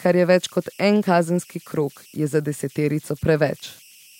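Converter idle tones run through the whole of this speech recording, heard as a whistle around 3 kHz in the pauses and a grainy texture beneath the quieter passages, sitting about 30 dB below the speech. With no dither, the delta-sigma converter's output settled into repeating bit patterns whenever the input level dropped low. Those cycles form tones whose pitch follows the input's small offset.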